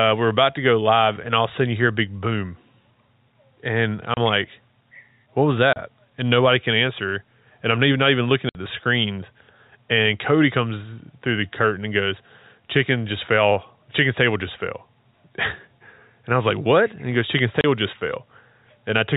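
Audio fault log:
4.14 s, 5.73 s, 8.49 s and 17.61 s, packet loss filled with silence: the speech drops out abruptly for 30 ms at 4.14, 5.73 and 17.61 s and for 60 ms at 8.49 s. Each gap is a whole multiple of 30 ms, which fits 30 ms packets, with the longer hole matching two in a row. The receiver substituted plain silence instead of concealing the loss, so the waveform is cut off and resumed sharply at each hole in the band-limited G.711 telephone audio.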